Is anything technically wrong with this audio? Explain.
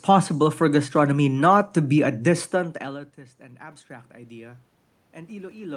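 Yes. From 2.86 to 4.58 s, just after "to be a distant", the voice and the room noise swell together by about 4 dB. This is automatic gain rising: the input fell by about 24 dB when the talker moved away around 2.5 s, and the gain control slowly raised its level to compensate.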